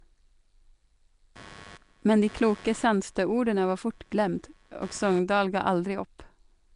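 From start to end, the speech has a rough, hissy, underwater smear with nothing above 10.6 kHz. This is likely Nellymoser compression, its coarse block coding starving weak bands.

From 1.36 to 5.19 s, computer activity noise buzzes well below the speech, pulsing around a hundred times a second as the computer's load changes disturb the shared ground.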